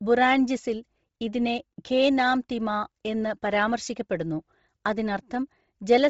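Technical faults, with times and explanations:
Throughout, Bluetooth LC3 compression: the speech has nothing above 7.7 kHz and a heavily breathy, grainy edge. This is likely the LE Audio transform codec zeroing upper bands and filling them with noise, which fits roughly 24 kbps with 7.5 ms frames.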